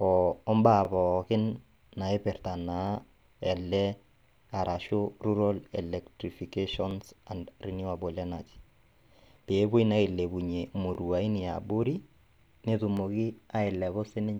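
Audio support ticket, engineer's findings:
Overlapping chunks: chunker/stream reassembly starts each 2.0 s chunk about 20 ms before the previous one ends, so every join replays a 20 ms slice of speech. Heard as a regular click/stutter at 0.85 s (just before "pookin naipirta"), 2.87 s (after "mbaa pookin naipirta"), 4.89, 6.91, 8.93, 10.95 s (after "naa ailepunye") and 12.97 s. Spacing of about 2 s matches the chunk length. Likely fix is in the overlap/offset handling at chunk boundaries.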